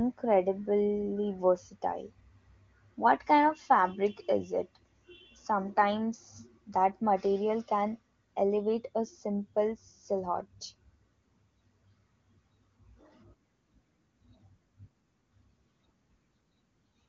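Nothing stood out on listening to this speech, which comes through the AMR wideband (HD Voice) codec at 23.85 kbit/s.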